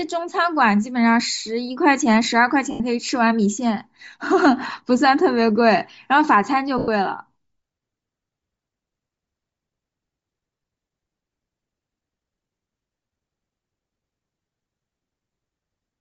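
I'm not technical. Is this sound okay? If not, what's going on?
No. The speech is damaged in two ways.

Throughout the clip, the voice has a breathy, grainy edge, and the top end sounds fuzzy and less clear. That points to Bluetooth LC3 compression, the likely cause. LC3 is the codec that Bluetooth LE Audio uses. To save data, it throws away much of the high-frequency detail and fills the gap with noise. Here the damage is plainly audible.

There are also lost LE Audio frames at two moments: from 2.71 to 2.81 s and from 6.78 to 6.88 s. These gaps last about 90 ms and 100 ms. In each one, a short run of the wireless audio packets never arrived. The receiver covered the gap by repeating the last bit of sound with scrambled detail. You hear this as a brief noisy smear that fades out, not as a clean cut.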